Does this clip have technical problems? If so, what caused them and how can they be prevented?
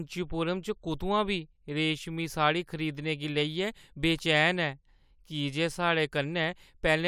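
No, no technical problems detected.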